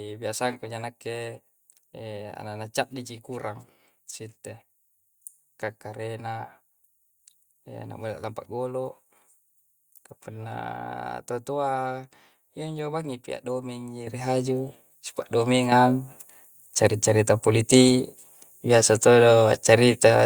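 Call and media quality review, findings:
Microphone volume stepped up, 14.07 s, just before "ri haju": abrupt level jump of about 9 dB, speech and background noise rising together. Probable component: call software's input gain control raising the device's mic volume in a single step.

Microphone volume stepped up again, 15.72 s: second jump of about 6 dB, same mechanism. The software judged the input still too quiet, so the floor and the speech climb together.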